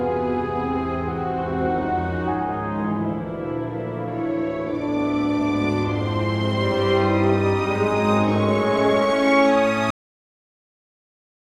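The final stretch of audio buffers was never written out or played back, leaving a cut-off end at 9.90 s. Whatever was sounding at that moment doesn't fade or ring out naturally. It stops abruptly mid-sound and drops straight to digital silence, which then holds for the remaining 1.6 s or so. The lack of any decay makes the ending feel truncated, as though the recording were interrupted rather than finished.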